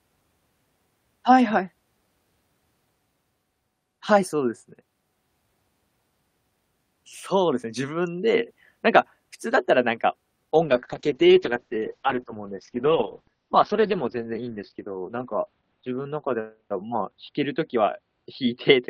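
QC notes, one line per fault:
10.55 s to end: call bitrate drop. The encoder falls from a rate that fits about 48 kbps to one near 7 kbps, sitting at its lowest for 5.04 s. Coarser coding makes the speech rough and watery, and the upper band vanishes above 6 kHz, leaving it muffled. Unlike packet loss, there are no gaps or repeated fragments. Unlike a simple low-pass filter, the grainy smearing arrives with the dulling, and it doesn't recover before the clip ends.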